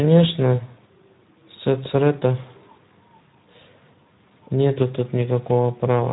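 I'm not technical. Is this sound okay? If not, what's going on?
No. All the way through, the speech sounds rough, noisy and hoarse, and it's muffled because nothing comes through above about 3.9 kHz. That's Speex codec damage: an older voice-chat compression squeezed the speech into very little data, so detail is lost.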